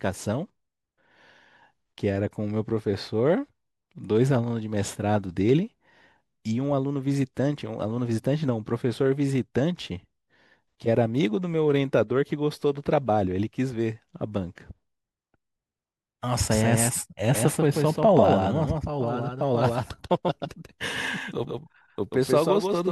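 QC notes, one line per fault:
16.51 s to end, doubled audio track: a dry copy about 150 ms late and 5 dB down cuts in abruptly, likely from a slower capture path.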